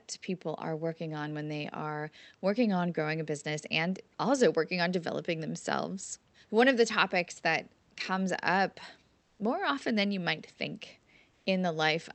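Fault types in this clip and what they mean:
Comfort noise in place of the background: during pauses at 9.21 to 9.39 s, after "topics that comes up", and at 11.31 to 11.45 s, the room background becomes a flat, featureless hiss, about 2 dB quieter the first time and unchanged the second, likely from Opus discontinuous transmission.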